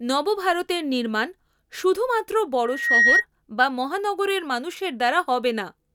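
From 2.64 to 3.25 s, just after "নবভারতের নির্মাণ শুধুমাত্র" and before "বা মহানগরের মানুষের", a loudspeaker feedback squeal rises over the speech. The microphone is picking up its own loudspeaker, and at 1.9 kHz the loop gain passes unity, so that one pitch feeds on itself. It swells over about a third of a second to roughly 10 dB above the speech. Unlike a steady interfering whistle, it grows on its own from nothing.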